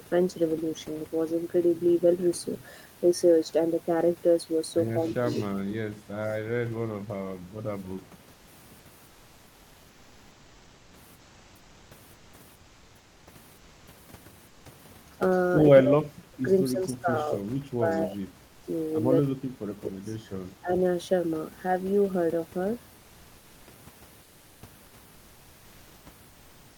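Between the phrases from 8.33 to 8.47 s, then 9.07 to 13.27 s, 13.57 to 13.87 s and 14.47 to 14.65 s, the room noise, which sits about 30 dB under the speech, gets swapped for comfort noise in place of the background. It's a flat, detail-free hiss, about 2 dB quieter than the real thing, so the gaps sound slightly dead. The likely cause is discontinuous transmission of the Opus DTX kind, where the sender goes quiet and the receiver invents the filler.

From 15.8 to 18.28 s and again from 19.28 to 20.71 s you get speech suppressed in double talk. The voice ducks hard in pieces, at worst dropping by somewhere past 30 dB, for about a second and a half in the first stretch and under a second in the second. That's likely the echo canceller losing track while both ends talked and clamping everything. The comfort-noise swap shows up once more from 24.23 to 24.93 s.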